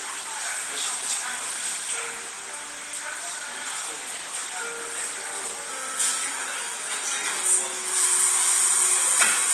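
The audio was likely squeezed through Opus compression at a very low rate, near 16 kbps, in hybrid mode, so the whole clip sounds plainly muffled and hoarse.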